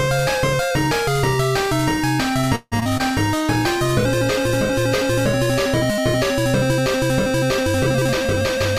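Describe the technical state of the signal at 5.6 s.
At 5.6 s the signal sits inside a call bitrate drop (3.37–6.83 s). The encoder codes coarsely and trims high frequencies, leaving a rough, muffled sound that fits a fall from about 128 kbps to roughly 21 kbps.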